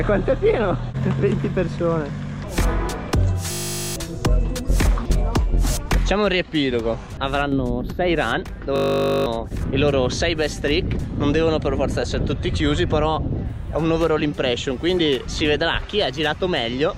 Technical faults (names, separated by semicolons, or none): system hang loop